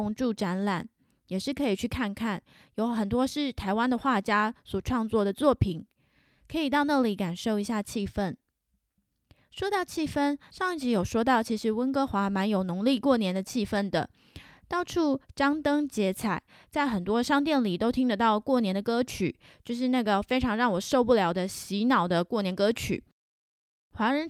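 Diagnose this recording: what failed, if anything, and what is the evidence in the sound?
Nothing failed: the speech recording shows no fault at any stage from capture to playback.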